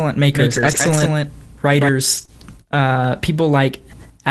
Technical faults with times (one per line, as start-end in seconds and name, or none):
0.35-1.89 doubled audio track
0.51-1.05 lost packet rebuilt from error correction
2.17-2.23 lost packet rebuilt from error correction
2.25-2.29 short concealed packet loss